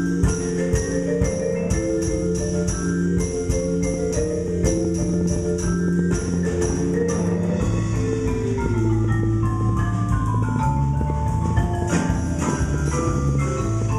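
From 3.94 s to 13.83 s a train of clicks runs over the sound: some fifty near-identical pulses at an uneven pace, about 5.3 per second, peaking roughly 10 dB above the audio, likely from electrical interference or a faulty connection or power supply. The matching click shapes separate it from random crackle.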